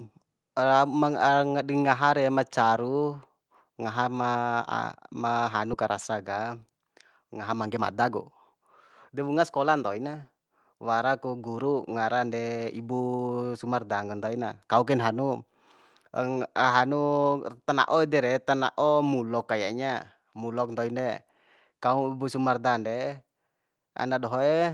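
At 5.73 s a skip ahead drops about a second of speech. Playback joins directly to later audio, with no gap, leaving an abrupt seam in waveform and spectrogram. From 6.35 to 6.86 s (108%), 7.66 to 8.11 s (114%) and 9.10 to 10.05 s (111%), jitter buffer speed-up trims pitch periods, so speech sounds hurried at unchanged pitch.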